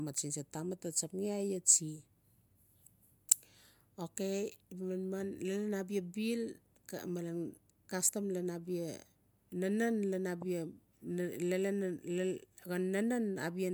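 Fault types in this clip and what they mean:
Nothing stood out on listening to the speech in this recording.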